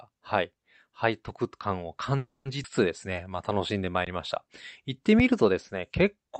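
At 2.17 s the speech stalls for about 0.3 s in a call audio freeze. The last sound carries on briefly as a decaying fill, then drops to silence for about 180 ms before speech resumes at exactly the point where it stopped. Nothing is lost; the stretch is simply pushed later. The likely cause is packets held up in transit so that the jitter buffer ran dry, which added roughly 280 ms of delay.

At 2.63 s comes a skip ahead. Playback jumps forward with only a few milliseconds of bridging, and around a tenth of a second of speech is missing. The two sides are butted almost directly together. This is consistent with audio being dropped in transit or by an overflowing jitter buffer, pulling the delay back by about 100 ms.

From 3.13 s to 3.91 s a jitter buffer slow-down stretches the speech to 88% speed, adding 106 ms. The pitch stays put, but sounds are drawn out where single pitch periods are repeated back to back. 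The buffer was building a reserve.

Two underruns with held sample follow, at 4.05 s and 5.19 s. In each case the output buffer emptied and the converter froze on its last value, so the waveform goes flat briefly, for about 17 ms and about 5 ms respectively. The audio that arrived during those gaps was discarded, roughly 20 ms in the first case and a few milliseconds in the second, so each resumes where the live signal rejoins.

Across the whole clip, the band-limited top end, stopping around 8 kHz, points to an Opus call path running at roughly 64 kbps.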